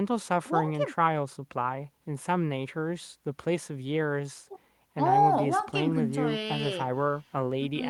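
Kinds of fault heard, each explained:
Nothing here to flag: the speech runs along without any technical faults catching the ear.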